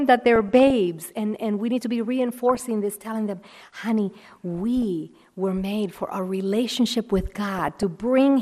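Throughout, the speech sounds dull and gurgling, with upper bands dropping out. That points to likely MP2 compression near 80 kbps, steady rather than bursty like reception errors.

DAB burbling appears at 0.36–0.70 s, 2.49–2.62 s, 4.82 s and 7.58–7.83 s: brief noise blips where a small fraction of bit errors corrupted individual sub-bands.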